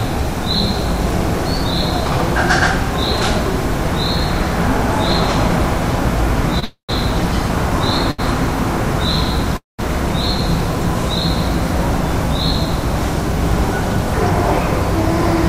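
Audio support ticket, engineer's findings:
Short stall from a late packet, 6.59 to 6.64 s and 8.11 to 8.20 s: last sound held about 28 ms and 75 ms, then resumes from the same point. Jitter buffer ran dry, receiver stretched audio. Spectrogram: brief smeared, repeated frame; waveform: repeated cycles.

Call audio freeze, 6.64 to 6.91 s (right after the first stall) and 9.57 to 9.81 s: last sound continues as a fading buzz or hiss, then about 120 ms and 160 ms of silence, then resumes with nothing lost. Likely packets delayed in transit, jitter buffer emptied. Spectrogram: decaying smear, then a blank gap. Waveform: tapering envelope, then a flat stretch.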